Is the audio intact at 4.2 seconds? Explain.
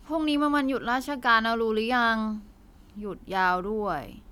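Yes, at 4.2 seconds the speech plays through with no audible dropout, click, distortion or other technical fault.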